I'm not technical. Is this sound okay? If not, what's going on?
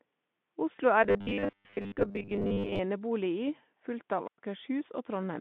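No. VoIP packet loss concealed by the speech codec at 0.75 to 0.80 s: one small chunk of the call, about 20 ms, never arrived. The decoder filled the gap by guessing from the sound just before it, giving a brief smeared, buzzy blur that fades out.

Robotic sound from repeated short buffers from 1.04 to 2.81 s: the audio turns into a stiff, metallic buzz at about 100 Hz. The likely cause is playback software that ran short of fresh audio and kept replaying the last 10 ms or so, with most of the real sound in that stretch skipped.

Wireless microphone squelch dropout at 4.25 to 4.38 s: the radio link from a wireless microphone weakened. The receiver muted itself to block the static, leaving a gap of near silence about 0.11 s long before the sound came back.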